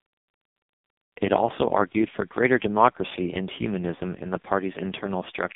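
From start to finish the speech passes through an AMR narrowband mobile codec, with heavy damage. The line keeps roughly 150 Hz to 3.7 kHz and nothing above 3.8 kHz survives. Within that band the voice is rebuilt from a vocal-tract model fed by sparse pulses, and the buzzy, synthetic grain suggests one of the lowest modes, near 5 kbps. A plain telephone band filter would muffle the sound without adding that robotic coarseness.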